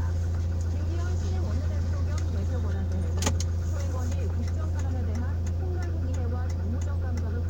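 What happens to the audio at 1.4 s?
Nothing goes wrong at 1.4 s: the sound plays through that moment intact, with no fault to be heard.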